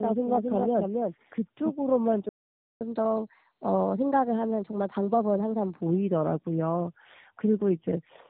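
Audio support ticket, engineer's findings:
Tandem speech coding, whole clip: speech rough, muffled and warbly. Sound suggests two low-rate speech codecs in series, e.g. G.729A then AMR-NB via a G.711 hop, with each re-encoding already degraded output at network borders.

Doubled audio track, 0 to 1.72 s, already present at clip start: full-band copy of the sound trailing by roughly 0.3 s, about 5 dB down, no reverb colour, cuts off abruptly. Likely a second, slower capture path mixed in alongside the direct one.

Playback stall, 2.29 to 2.81 s: output goes silent mid-flow for 0.52 s, then resumes. Likely player buffer underrun or a blocked audio thread, with output muted until data or scheduling recovered. Probable component: client jitter buffer or playout thread.

Catch-up at higher speed, 2.81 to 5.81 s: speech runs at 1.15x with pitch raised about two semitones, then returns to normal. 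Player resampling the backlog after the stall to recover lost time. Probable component: client playout rate control.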